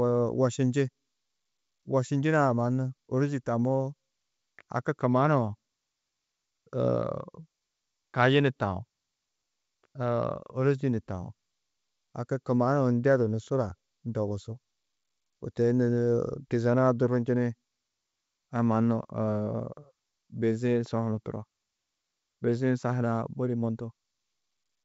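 Nothing here comes across as a fault; the speech has the familiar sound of G.722 wideband telephone coding, carrying up to about 7 kHz as that coding should.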